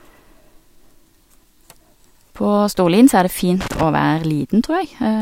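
From 3.61 to 3.83 s the speech is broken by loose connector crackle: a worn or dirty contact making and breaking as it shifts, chopping the signal for about 0.22 s. Its irregular, scratchy clustering sets it apart from the isolated ticks of digital clicks.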